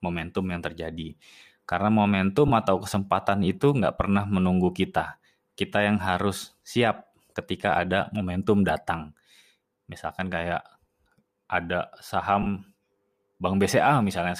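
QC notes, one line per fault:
2.48–2.50 s, lost LE Audio frames: about 15 ms of Bluetooth audio went missing, which fits two 7.5 ms frames. The LC3 decoder refilled the gap with the previous spectrum under random signs, leaving a brief noisy smear.
12.42–12.47 s, lost LE Audio frames: a longer dropout of about 37.5 ms, consistent with five consecutive frames. The concealed spectrum repeats, then fades, so the speech briefly blurs and sinks toward silence.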